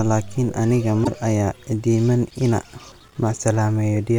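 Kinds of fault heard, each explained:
Damaged data in a compressed stream: a brief glitch of about 70 ms breaks into the speech at 1.01 to 1.08 s, between "laakin aniga" and "aya iidiman ina". Corrupted bytes made the decoder misread those frames and lose sync until it found the next valid frame header.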